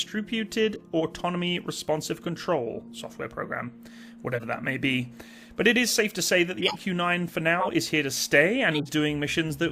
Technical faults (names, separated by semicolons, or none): corrupt frame decoded